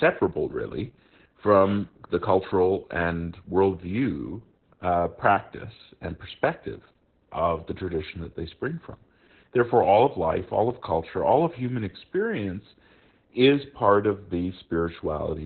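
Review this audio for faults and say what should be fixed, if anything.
Opus voice compression runs through the whole clip, and the damage is heavy. The speech is cut off at about 4 kHz, which means the codec fell back to narrowband. Only the SILK linear-prediction coder is at work, so the excitation is coded coarsely, and the voice sounds muffled, hoarse and faintly robotic. That combination points to a bitrate near 8 kbps. To prevent it, encode at a higher Opus bitrate so the codec keeps wideband or fullband audio.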